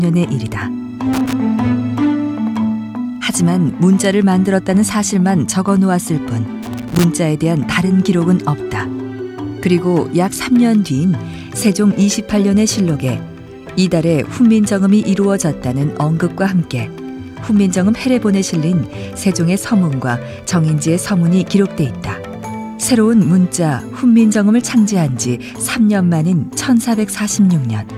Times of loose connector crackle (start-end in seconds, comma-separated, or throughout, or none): 1.13-1.33, 6.63-7.04